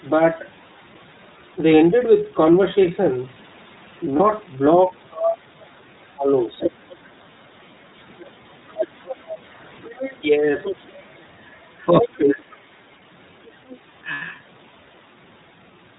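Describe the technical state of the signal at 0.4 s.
At 0.4 s the speech carries iLBC codec damage, present across the whole clip. Each 30 ms frame's excitation is coded on its own, fitting the 13.33 kbps mode, leaving plainly audible roughness and a synthetic edge with nothing above 4 kHz, unlike a clean low-pass band limit.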